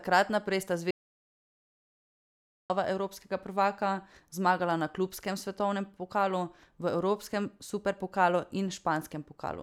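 At 0.91 s the speech cuts out abruptly and stays in total silence until 2.70 s, when it returns mid-flow: an audio dropout to silence lasting about 1.79 s. There is no room tone in the gap, which points to the input being lost, likely through a disconnected device or failed link, while the recorder kept writing silence. The waveform shows a flat line, the spectrogram a fully black band, and whatever was said there is gone.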